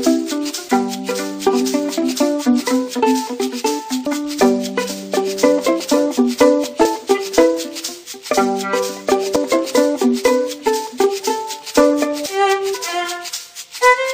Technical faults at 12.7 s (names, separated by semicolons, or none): damaged data in a compressed stream